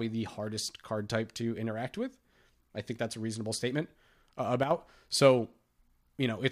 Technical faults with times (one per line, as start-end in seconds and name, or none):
4.63-4.71 one channel drops out